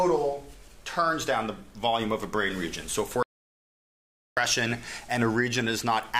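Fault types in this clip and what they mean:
Audio dropout to silence: The sound cuts off abruptly at 3.23 s and returns at 4.37 s. The gap lasts about 1.14 s. It is silent, with no room tone at all. The likely cause is a lost input while recording continued. Whatever happened then is gone.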